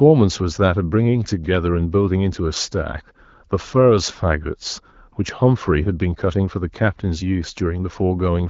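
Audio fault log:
No faults heard.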